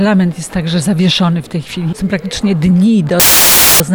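From 3.20 to 3.80 s the player treats an embedded cover picture in the file tags as audio. Its compressed image data decodes as random samples, so the file tags played as audio burst out as very loud white noise, starting and stopping abruptly.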